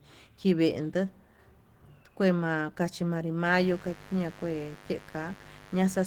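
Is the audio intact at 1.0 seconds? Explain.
No. At 1.0 s, as throughout, the speech carries Opus voice compression at 16 kbps in hybrid mode. SILK linear prediction codes the lower band, with a CELT layer above it, and the coarsely coded excitation in 20 ms frames leaves a plainly audible hoarse, slightly robotic grain.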